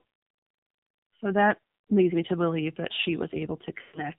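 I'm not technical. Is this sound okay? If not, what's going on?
No. The whole recording has passed through the AMR narrowband mobile codec, the speech compression used on older 2G and 3G phone calls. It keeps only the lower part of the sound, roughly up to 4 kHz, so the voice sounds muffled and boxy, like a phone call. The compression here is very strong, which makes the voice buzzy and artificial, as if a machine were rebuilding it rather than recording it.

Near the end, from about 3.82 to 4.09 seconds, there are lost AMR speech frames. A short stretch of the call, about 0.12 seconds, was damaged in transmission and never arrived intact. To cover the gap, the phone's decoder keeps repeating the last sound it received while turning it down. You hear the voice smear into a drawn-out tone that fades away before the voice comes back weak or rough for a moment.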